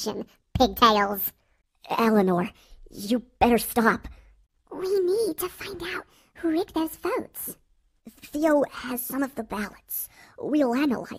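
No technical faults can be heard anywhere here.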